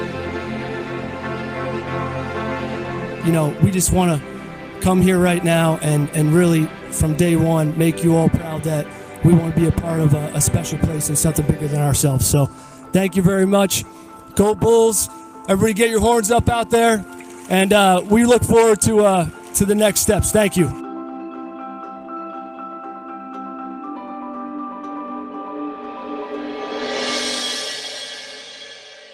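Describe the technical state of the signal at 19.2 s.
At 19.2 s the signal is intact, with no audible fault at that point.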